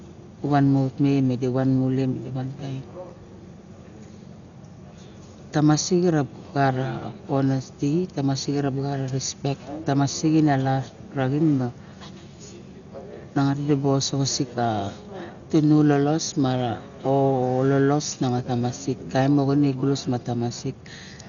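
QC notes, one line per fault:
Throughout, Dolby Digital compression: the speech is dull, with nothing above 6.9 kHz, and a rough, fluttering noise clings to the voiced tones. The cause is likely a Dolby Digital encode at a low rate, which fits about 48 kbps. At that rate the encoder cuts the bandwidth and leaves many frequency lines without mantissa bits, and the decoder fills those lines with dither noise. This damage is heavy across the clip.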